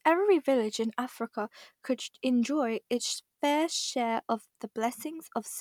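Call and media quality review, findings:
No defects found on review of the speech recording; nothing to attribute to capture, network or playback components.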